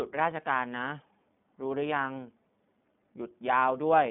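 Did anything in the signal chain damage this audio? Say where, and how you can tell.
Yes. Across the whole clip the speech sounds boxed-in and slightly rough, with a synthetic edge from the first second to the last. Nothing reaches above about 3.8 kHz, and the band sits near 150 Hz to 3.6 kHz. This is damage at the codec stage, from the iLBC codec. It codes each short frame's excitation independently. The texture fits 20 ms frames at its 15.2 kbps mode, and that independent coding leaves the plainly audible grain.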